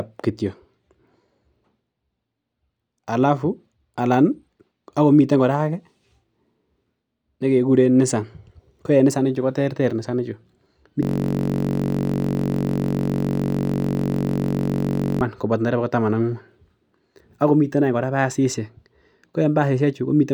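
A system hang loop runs from 11.03 to 15.21 s, ending just before "koboto ndereba". The computer or its audio driver stalled while the sound hardware kept replaying whatever sat in its ring buffer, so one 21.33 ms slice of audio repeats nearly 200 times. That slice length fits a 1024-sample buffer. Because the loop is so short, the speech gives way to a steady buzz at 46.9 Hz for about four seconds.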